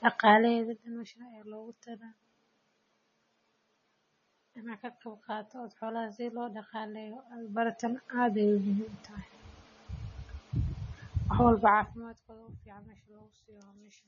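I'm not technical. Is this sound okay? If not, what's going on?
No. MP3 compression damage runs through the whole speech clip. The squeezing was likely heavy: everything above 7 kHz is gone, making it dull, and quieter details flicker in and out, giving a watery, swirly sound with metallic chirps on s sounds.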